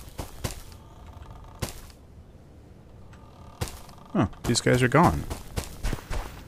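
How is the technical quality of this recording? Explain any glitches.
The recording has one clear fault: word clock ticks. Short, sharp ticks of uneven strength occur at a steady rhythm, about every 0.7 s from 0.16 s to 6.43 s, roughly ten in all. The receiving device runs on its own clock, which drifts from the sender's by a few tens of parts per million. Each time the two clocks slip past each other, a single sample is dropped or repeated and its neighbours are misread, producing a tick. Buffer dropouts leave audible gaps at irregular moments. These ticks instead have metronomic spacing, single-sample size and no silence around them, which marks them as clock slips.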